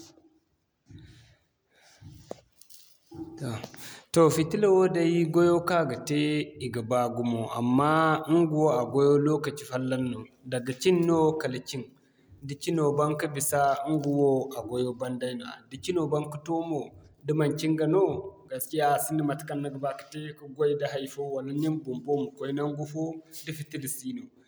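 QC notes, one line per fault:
No faults heard anywhere in this speech recording.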